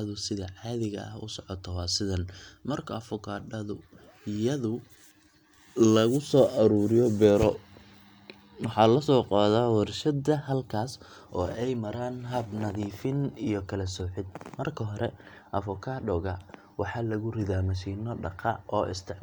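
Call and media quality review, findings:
No discontinuities, level anomalies or transport defects detected in the speech signal; capture, encoding and playback path shows no audible fault.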